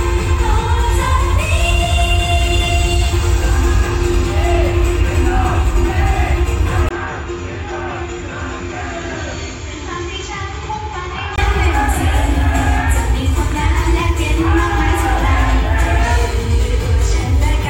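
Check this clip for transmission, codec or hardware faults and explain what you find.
One fault stands out. Input switched to a poorer device, 6.89 to 11.38 s: the recording likely jumped to a narrower-band input. After a 20 ms gap, nothing passes above 7.4 kHz, the level falls by about 10 dB, and a faint new noise floor appears, so the sound turns dull until it clears.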